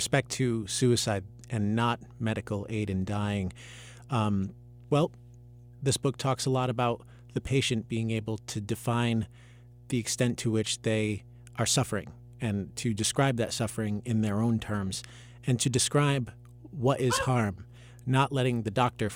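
A steady low tone runs underneath the speech from start to finish, a constant drone at 60 Hz with a few low harmonics above it, sitting roughly 20 dB below the talking. This is mains hum. Power-line current has coupled into the signal path, most commonly through a ground loop between connected devices or through the magnetic field of a nearby transformer.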